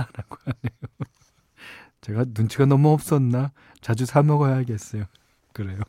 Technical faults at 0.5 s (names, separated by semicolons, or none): none